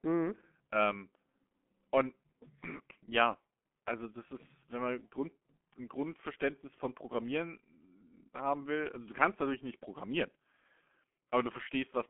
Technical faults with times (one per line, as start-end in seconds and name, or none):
0.00-12.09 G.723.1 codec